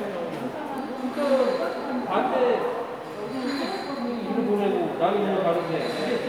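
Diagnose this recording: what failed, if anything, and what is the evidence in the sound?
Nothing failed in this recording.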